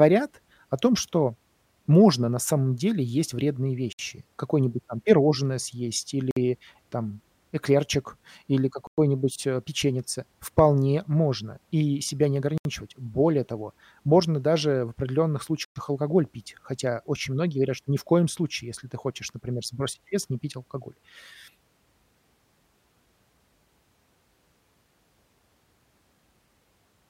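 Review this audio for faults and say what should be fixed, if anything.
Bluetooth stall, five times: 3.93–3.99 s after "самом деле есть вредные", 6.31–6.36 s, 8.87–8.98 s before "э печеньице", 12.58–12.65 s and 15.65–15.76 s. Each is a dead gap of 54 to 113 ms that cuts the speech, likely from a starved headphone buffer waiting on resent packets. On a waveform these show as flat, near-silent slices, and on a spectrogram as blank vertical bands. Prevent it by recording through a wired connection or keeping the wireless link clear of interference.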